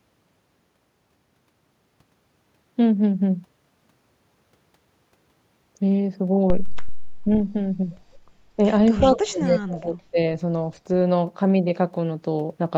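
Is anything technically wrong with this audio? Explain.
Yes, two faults overlap near the end of the speech. Speech suppressed in double talk, 9.01 to 10.19 s: the echo canceller likely mistook simultaneous talk for echo, so the voice dips in pieces, by as much as about 30 dB. Echo leak, 9.13 to 9.18 s: a brief copy of the voice returns 217 ms late, about 15 dB quieter, likely escaping incomplete loudspeaker echo cancellation.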